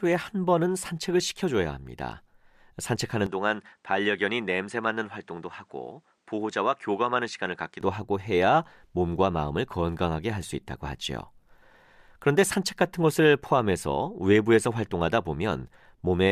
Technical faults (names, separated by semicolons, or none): input switched to a poorer device